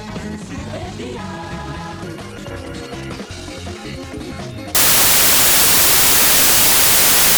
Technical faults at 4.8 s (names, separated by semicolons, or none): samples built from the wrong bytes